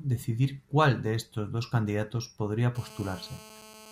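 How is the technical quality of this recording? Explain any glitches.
The recording has one clear fault, GSM phone buzz, from 2.75 s to 3.92 s, right after "estos dos candidatos podría". A hard, raspy buzz at 217 Hz, rich in harmonics, sits about 21 dB below the speech and stays steady. A nearby 2G phone on a call transmits in bursts, and the audio circuitry rectifies those radio pulses into the signal.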